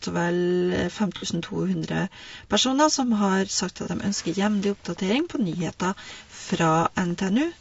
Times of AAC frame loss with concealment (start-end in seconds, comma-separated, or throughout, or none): 1.16-1.25, 3.83-3.88, 6.17-6.22